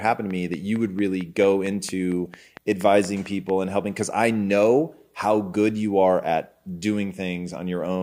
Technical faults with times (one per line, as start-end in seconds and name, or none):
0.09-3.50 train of clicks